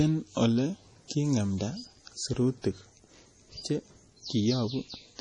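From start to finish the speech carries heavy codec damage, most likely from MP3 compression at a low bitrate, with a sound that fits roughly 32 kbps. Nothing is present above 10.3 kHz, where the encoder has cut the treble outright. Below that, too few bits forced it to drop weaker frequency components, which flicker in and out between frames and give the audio a watery, unstable texture with smeared onsets.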